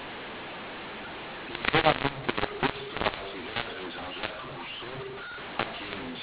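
From start to finish the speech carries a mu-law and A-law mix-up: the telephone signal was encoded with A-law but decoded as mu-law. Because the two logarithmic curves place their segments differently, each 8-bit code maps to the wrong level. Loud and soft passages are scrambled, the quietest samples are pushed well above silence, and the pauses fill with a hiss. The result is harsh and distorted, and it stays within the 4 kHz band of 8 kHz telephone audio.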